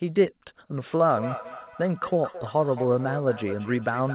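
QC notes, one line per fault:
1.09 s to end: feedback echo between two devices. The speech returns about every 0.2 s, peaking at about 13 dB below the direct signal and sounding thin and ringing, because a second device replays it into the microphone, where that device's echo canceller cannot remove it.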